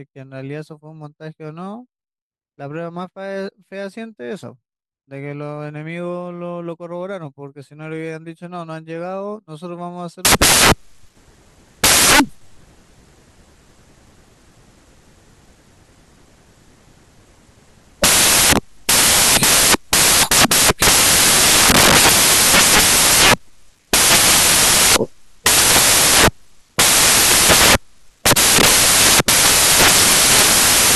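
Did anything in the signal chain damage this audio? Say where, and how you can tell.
Yes. From 10.25 s to the end, the speech is replaced by loud, harsh broadband noise. The damage sits at the sample-format conversion stage. These are samples built from the wrong bytes. The reader assembled each sample from misaligned or swapped bytes. The busy low-order bits then became the large part of each value. That is why it sounds like broadband hiss rather than distortion.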